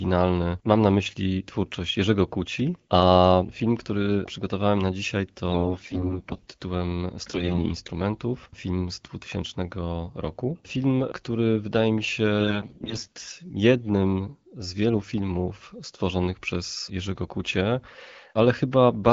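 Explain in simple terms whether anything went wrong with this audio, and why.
Three short stretches of the speech turn hoarse, scratchy and gargly while keeping roughly the same pitch and loudness: 5.50 to 6.50 s, just after "który przygotowałem na dzisiaj"; 7.30 to 7.66 s, just before "instrumentów film z"; and 12.40 to 13.32 s, between "który wydaje mi się" and "jednym z wielu filmów". These are AMR bit errors. A weak phone link flipped the less protected bits, so the digital voice model rebuilt those moments from partly wrong data.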